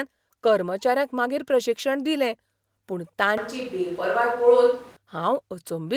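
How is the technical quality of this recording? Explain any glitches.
One glitch stands out. From 3.37 to 4.97 s, just after "मागीर प्रशिक्षण दिलें पूण", the speech turns roomy, hollow and thinner, then snaps back. This is likely a switch to a distant microphone. The level stays about the same, but faint room noise comes in.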